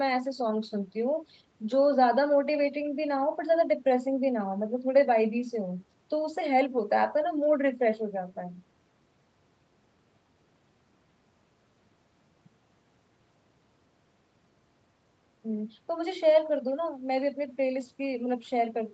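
No faults are audible in the speech; the call microphone processing and the WebRTC call path both work as intended, with nothing above 8 kHz, as expected from a call codec running at that bandwidth.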